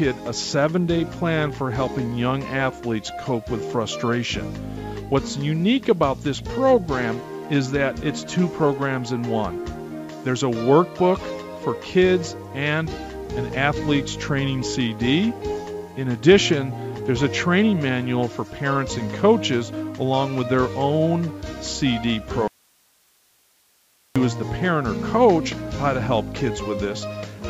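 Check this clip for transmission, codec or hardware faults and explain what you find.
One fault shows up, a single break in the signal, heard through a call path whose sound stops at 8 kHz, which fits a wideband call codec.

Audio dropout to a faint residue, 22.48 to 24.16 s: the signal cuts out abruptly for about 1.7 s and returns just as suddenly. The gap holds only hiss, around 40 dB below the signal, likely because the wanted audio was lost while the path after the break stayed live.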